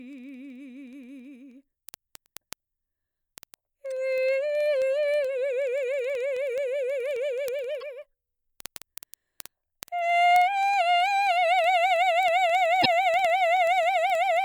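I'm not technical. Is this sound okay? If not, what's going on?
No, it isn't. Two separate problems can be heard in this music.

The first is word clock ticks. From 0.13 s to the end, there is a small tick about every 0.05 s, so roughly twenty per second and a few hundred in all. Two digital devices are passing audio between them, but each keeps its own time. Their clocks drift apart by a few hundred parts per million. Each time they slip, a single sample is lost or doubled, and you hear a click.

The second is damaged data in a compressed stream. Part of the compressed audio file or stream got corrupted, so the player couldn't read those bits properly. It stumbled and then picked up the music again. Each spot makes a short chirp or blip. These happen at 3.91 s, from 7.81 to 7.83 s, and from 12.79 to 12.86 s. The last one is the longest.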